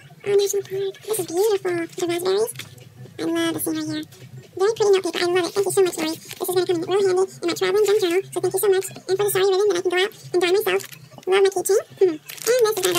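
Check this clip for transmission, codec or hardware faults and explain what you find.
There's one fault, and it runs the whole clip: audio read two samples at a time (double speed). Sample pairs get treated as single frames, so everything plays at 2x and an octave high.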